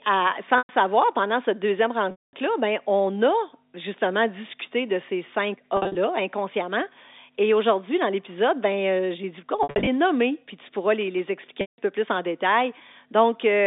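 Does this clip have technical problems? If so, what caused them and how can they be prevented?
Yes. Mains hum runs through the whole recording: a steady 50 Hz tone with a few low harmonics sits roughly 25 dB below the speech, under the telephone-band sound. A ground loop or a transformer near the microphone or interface is feeding the power-line frequency into the signal path. Prevention: run all the equipment from one earthed outlet, use balanced or isolated connections, and keep audio cables away from power supplies.

Packet loss with pitch repetition occurs at 0.58 s (about 110 ms lost), at 2.11 s between "pendant cette deuxième" and "ben on a justement" (220 ms), at 5.77 s (140 ms, scattered over 180 ms), at 9.63 s between "euh j'ai dit on" and "nommer puis tu pourras" (170 ms, scattered over 240 ms), and at 11.61 s between "pourras les les expliquer" and "peu plus en" (170 ms). The receiver fills each gap by repeating the last pitch cycle, which produces a brief buzzy hold that fades, then cross-fades back into the speech. 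The gap lengths fit runs of 10 ms packets. Prevention: use a more stable network path or a larger jitter buffer, and add forward error correction.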